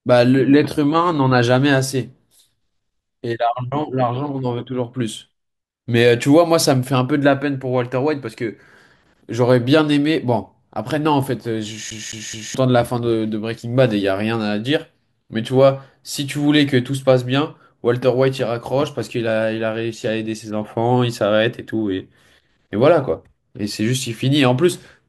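At 11.90 s the speech catches in a CD stuck on one turn. A scratch keeps throwing the laser back one track. The same 0.21 s slice plays three times, each jump marked by a brief mute. The fast, even stutter ends at 12.54 s.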